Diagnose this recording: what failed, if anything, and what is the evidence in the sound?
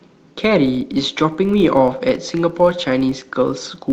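A steady buzz of ticks at about 46.9 Hz runs under the speech for its whole length, rising and falling with its level. It comes from a filter restarted on every block in the buffer stage. Each block starts from silence, which fits a 1024-sample buffer.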